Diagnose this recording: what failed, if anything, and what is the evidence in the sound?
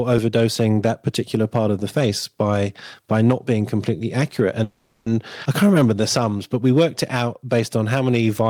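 Hard clipping at the converter or gain stage: the signal is driven about 5 dB past full scale, so peaks in under 1% of samples flatten, crackling throughout the speech.

Call audio freeze, likely from network packets stalling and the jitter buffer draining: from 4.63 to 5.07 s, about 430 ms of extended buzz fills the gap before the speech resumes with nothing lost.

Jitter buffer slow-down in call processing: from 5.63 to 6.38 s the receiver repeats pitch periods, adding 97 ms, so speech plays at 88% speed with unchanged pitch.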